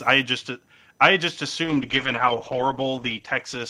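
Speech clip. Load swings in the computer's processor, graphics card or mouse disturb the shared audio ground throughout, producing computer activity noise: a faint buzzing chirp pulsing at roughly 1 kHz, around 40 dB below the speech, rising and falling with machine activity rather than with the talker. From 1.65 s, right after "i just i just", a call bitrate drop forces the Opus encoder to code far more coarsely. This is consistent with a fall from about 48 to 10 kbps, bottoming out for 1.16 s. The speech turns rough and watery, its high frequencies cut away and muffled, through to the end.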